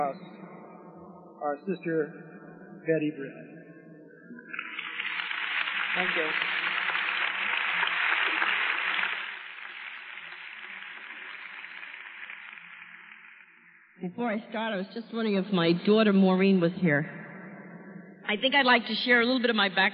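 Level changes applied in coarse steps, about a hundred per second with no smoothing, cause zipper noise from 9.01 to 9.43 s as the level drops by roughly 15 dB, and from 15.06 to 15.75 s as it rises by about the same, leaving a fine ticking buzz riding on the sound.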